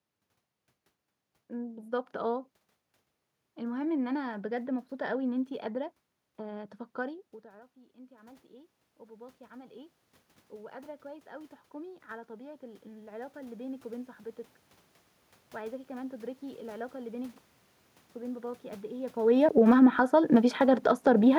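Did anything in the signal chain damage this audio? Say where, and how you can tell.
Yes, the call processing stage's automatic gain control audibly reshaped the level twice. From 6.23 to 14.19 s there is automatic gain rising. Around 7 s the talker moves away, and the input drops by about 24 dB. The control slowly climbs by about 16 dB to compensate, so the voice and the room noise swell together over several seconds. On a spectrogram the noise floor brightens across all frequencies in step with the voice, and the waveform envelope ramps upward rather than jumping.

From 19.43 to 21.09 s there is automatic gain falling. Around 19 s the talker moves again. The control then pulls its gain down by about 4 dB over roughly a second and a half, so the sound starts loud and sinks, with the background sinking alongside it. The waveform shows a tall onset that tapers smoothly, and the spectrogram shows the whole band, noise included, dimming together. 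The moves themselves are the talker's doing, but the shared, gradual ride of voice and background is the gain control's.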